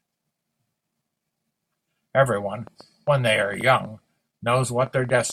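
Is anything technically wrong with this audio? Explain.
Yes. A train of clicks runs from 2.67 s to 5.31 s, nearly to the end of the clip. There are roughly twenty clicks, about 6.5 per second, at an uneven pace. Each is a short, sharp pulse of much the same shape, peaking about as loud as the speech itself. They are heard as ticking or popping laid over the speech and in its pauses. The likely cause is interference from nearby equipment or a faulty connection or power supply.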